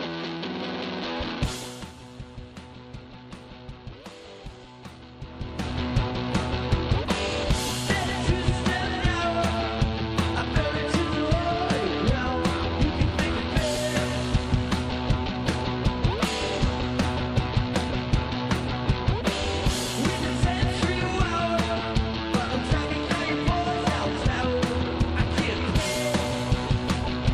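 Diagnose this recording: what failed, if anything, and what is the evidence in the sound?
Nothing failed, and the sound holds no evidence of any fault.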